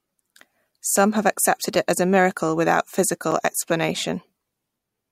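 At 3.31 s the output path delivered a block of digital silence, about 6.4 ms of silence in place of the speech. The sound drops to nothing and returns with no fade, so the abrupt edges produce a brief tick rather than an audible hole.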